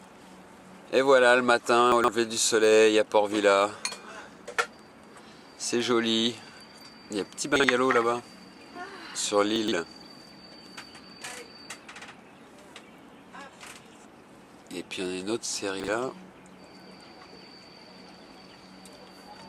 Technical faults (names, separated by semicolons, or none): chunks out of order